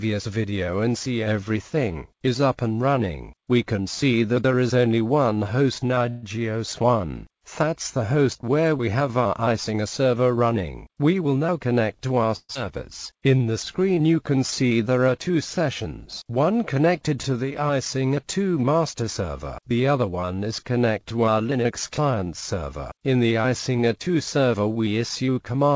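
At 6.10 to 6.24 s comes a call audio freeze: for 125 ms the last sound is stretched into a fading buzz, likely from delayed packets draining the jitter buffer, and it resumes with nothing lost. A spectrogram shows smeared, decaying horizontal bands there.

From 11.13 to 12.30 s a jitter buffer speed-up plays the sound at about 109% speed, with unchanged pitch, trimming roughly a tenth of a second. The waveform looks slightly compressed in time.

At 12.36 to 12.57 s a long network dropout fills 187 ms with a fading buzz ending in 30 ms of silence. About 100 ms never returns, leaving a visible gap and a jump where the sound resumes.

From 13.13 to 14.07 s a jitter buffer slow-down runs at 90% speed, adding 100 ms through repeated pitch periods. The spectrogram shows stretched, repeated patterns at steady pitch.

Throughout, the spectrogram stops sharply at 8 kHz, which fits a G.722 call codec at around 64 kbps.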